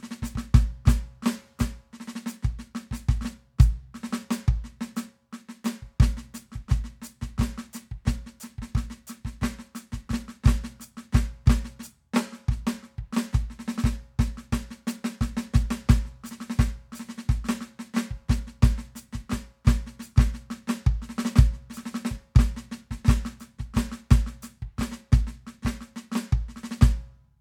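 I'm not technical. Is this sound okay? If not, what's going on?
Yes, this music recording is technically sound, with nothing going wrong in the signal at any point that you would need to worry about.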